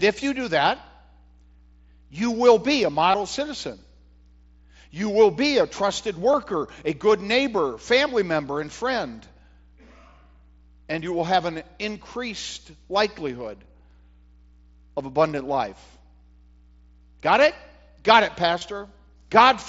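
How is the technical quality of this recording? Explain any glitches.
The recording has four brief dropouts, heard as concealed Bluetooth headset packet loss over an mSBC headset link that limits the audio to wideband speech. They occur at 3.12–3.14 s after "you will be a", at 6.32 s after "will be a trusted", at 8.65 s after "good neighbor family member", and at 18.59–18.61 s. Each gap of about 15 to 23 ms, which fits two or three lost headset frames, was filled by repeating recent waveform. The result is a momentary buzzy smear rather than silence.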